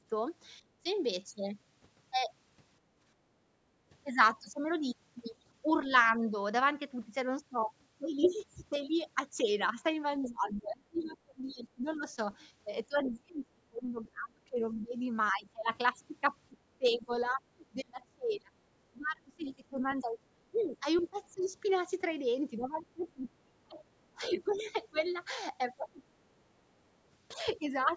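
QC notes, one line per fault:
0.0–0.85 s and 10.28–26.01 s, speech suppressed in double talk: the speech dips by up to roughly 20–25 dB, likely the echo canceller turning down both talkers at once. Unlike gating, it hits the speech itself.
0.62–0.73 s and 2.81–3.85 s, background gated by the echo canceller: the room sound drops by about 12 dB, then about 8 dB, while the loudspeaker plays, and returns when the canceller releases.
10.23–13.11 s, 19.02–21.49 s and 23.09–24.8 s, other side's voice leaking through: a second, fainter voice, roughly 15, 20 and 35 dB under the speech, likely loudspeaker echo the canceller missed. It adds sound rather than removing it.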